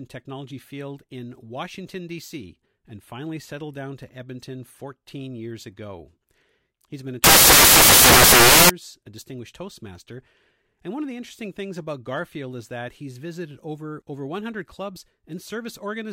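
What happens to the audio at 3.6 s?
Nothing goes wrong at 3.6 s; the speech runs through that moment intact, with no dropout, click, glitch or other fault to be heard.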